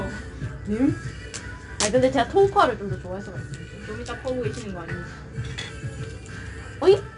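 From start to end the sound carries 4-bit ADPCM compression: each sample is coded as a coarse step from a prediction, so a gritty hiss rides on every loud passage and rises and falls with it, unlike steady background noise or the swirling of perceptual codecs. Nothing reaches above about 10.6 kHz, which fits a rate near 89 kbps.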